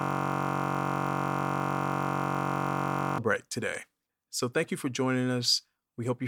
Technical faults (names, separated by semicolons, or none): system hang loop